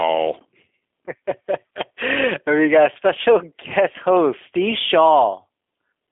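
From start to finish the speech carries G.729 codec damage, plainly audible. The codec rebuilds each 10 ms frame from a vocal tract model, pitch prediction and a few pulses, leaving a rough, synthetic buzz. Unlike plain band-limiting, the texture itself is altered, though nothing above about 3.6 kHz survives, consistent with an 8 kbit/s G.729A stream.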